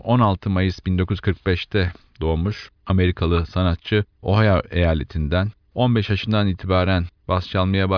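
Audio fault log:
No fault in this audio.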